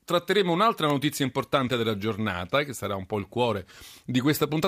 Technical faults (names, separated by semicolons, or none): electrical switching spike